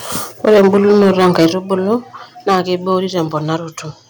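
Microphone overload runs from 0.44 to 1.47 s, about 9 dB over full scale, with roughly a tenth of samples flattened. The likely cause is input gain too high for the converter, which gives harsh crackle and squared-off waveform peaks with smeared high-frequency energy on a spectrogram. Within it, at 0.53 s, the microphone volume steps down by 2 dB, likely the call software reducing device gain, seen as a sudden drop in waveform envelope. A larger 6 dB step down follows at 1.53 s, lowering the sound and the background at once. Brief overload recurs at 1.92 to 1.94 s, about 1 dB over with a few percent of samples clipped, then more heavily from 2.48 to 2.59 s at about 7 dB over, with a 3 dB step down at 2.55 s. A final mild overload spans 2.91 to 3.21 s, about 1 dB over with very few samples clipped, showing only occasional flat tops and faint crackle.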